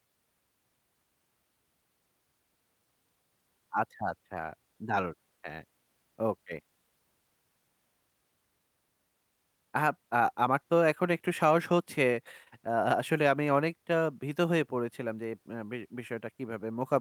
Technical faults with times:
none

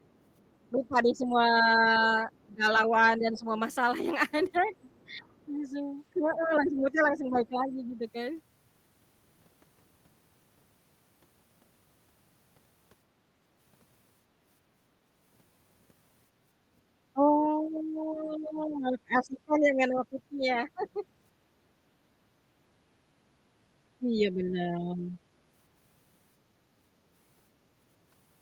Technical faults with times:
0.06-5.08 other side's voice leaking through
0.71-8.05 speech suppressed in double talk
7.33-7.39 other side's voice leaking through
17.13-21.04 speech suppressed in double talk
20.20-20.89 other side's voice leaking through
23.99-25.17 speech suppressed in double talk

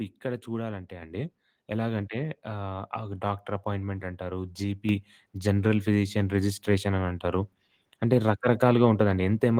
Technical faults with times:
1.02 microphone volume stepped up
4.89 microphone volume stepped up

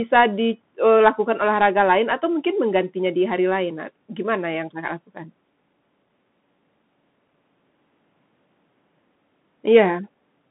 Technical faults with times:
0.00-10.50 Bluetooth CVSD headset codec

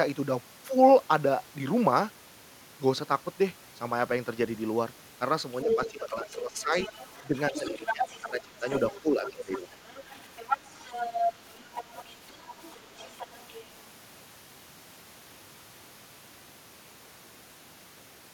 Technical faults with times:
5.64-6.75 speech suppressed in double talk
5.69-8.22 other side's voice leaking through
7.28-8.66 speech suppressed in double talk
8.68-13.65 other side's voice leaking through
9.01-9.77 speech suppressed in double talk

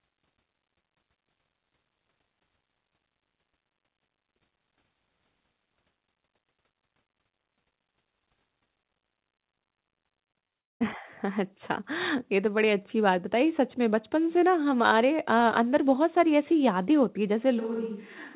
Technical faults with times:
10.40-10.53 short concealed packet loss
10.53-10.82 long network dropout
17.61-18.36 switch to a distant microphone

